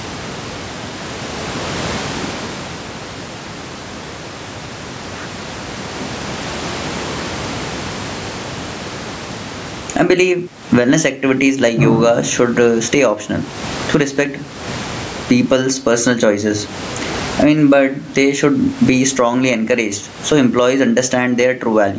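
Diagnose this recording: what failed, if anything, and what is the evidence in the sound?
Throughout, the gain swings by around 20 dB, leaving the speech squashed. That is gain pumping at the call-processing stage, likely microphone gain set far too high, with a fast limiter clamping every peak.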